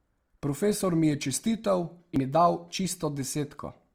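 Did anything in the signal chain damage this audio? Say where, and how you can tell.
Yes. Throughout the speech there is a rough, grainy texture: harmonics sound noisy rather than clean, yet the full audio bandwidth remains and there is little swirling. That points to Opus compression, likely in its music (CELT) mode at a low bitrate around 24 kbps, filling starved bands with folded or noise content.

At 2.16 s there is a CD skip at the playback stage: a tick and a brief mute of only a few milliseconds, after which the speech resumes from a different point. The laser has jumped to another turn of the disc spiral, so the continuity breaks abruptly.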